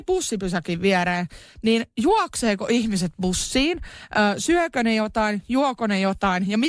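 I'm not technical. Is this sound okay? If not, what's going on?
Yes, nothing wrong turned up anywhere in the recording.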